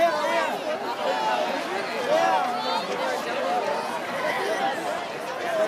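Four isolated sharp clicks sit in the audio at 0.51, 1.60, 4.06 and 4.98 s, each a single thin vertical line across the whole spectrum. The likely cause is dropped samples: a tiny fraction of a millisecond is missing, so the waveform jumps abruptly to a later value. Unlike a dropout, there is no audible gap or silence and no sound goes missing. There is only the instantaneous tick of the discontinuity.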